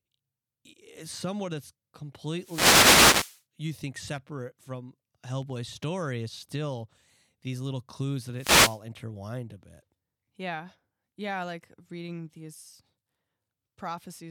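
At 2.38 to 3.42 s and 8.33 to 8.81 s, wireless microphone noise hits: the FM radio link fades, letting receiver noise swish and crackle over the speech.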